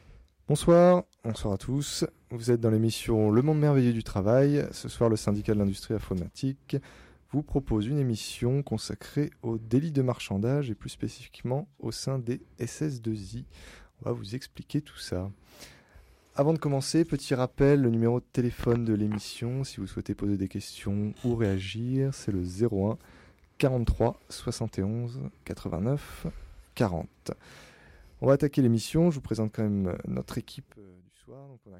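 From 30.72 s to the end at 31.79 s, the sound suddenly drops by about 22 dB, as if most of its body has been drained away and only a faint, distant trace remains. The likely cause is one channel inverted: one side of the stereo pair has flipped polarity, so whatever both channels share cancels itself when they are combined to mono, leaving only the small difference between them audible.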